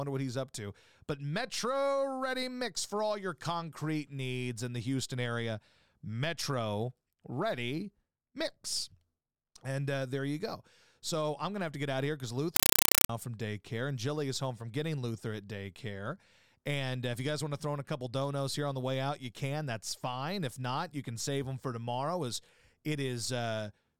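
After "out of here because", from 12.56 to 13.09 s, a compressed stream played as audio replaces the speech, with undecoded AC-3 data read as samples. Loud 5.3 ms noise bursts separated by zero padding repeat 31.25 times a second, chattering rhythmically unlike steady hiss, until "from daycare and".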